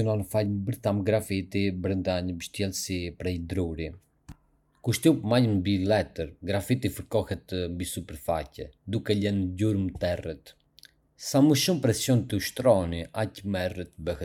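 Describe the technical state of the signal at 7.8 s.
At 7.8 s the speech signal is intact, with no fault present at that moment.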